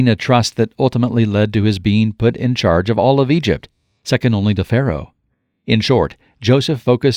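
No technical faults can be heard anywhere in this recording.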